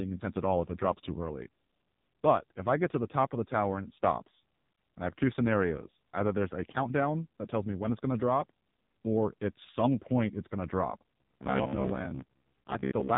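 Throughout, the speech passes through the AMR narrowband mobile codec, squeezed hard enough to suggest a low mode near 5.9 kbps. Its 8 kHz sampling discards everything above 3.8 kHz, so the voice is muffled and dull, with a heavy buzzy, synthetic edge.

From 11.20 s to 13.17 s, just after "it's going to drop", audio likely arrived too seldom, so short stretches were replayed while about half the real sound was skipped. Each 15 ms repeat imposes a rigid 66.7 Hz metallic buzz that only loosely follows the speech.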